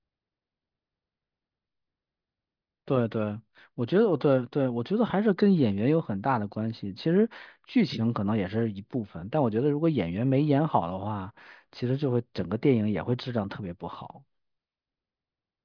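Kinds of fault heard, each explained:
No technical fault can be heard anywhere in the signal.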